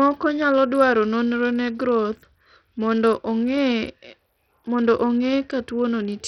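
Across the whole speech clip, the treble flickers and thins, and a gritty grain rides on every sound. Nothing reaches above 16.1 kHz. This points to heavy Bluetooth SBC compression, likely at a bit pool starving the top sub-bands, fitting roughly 64 kbps.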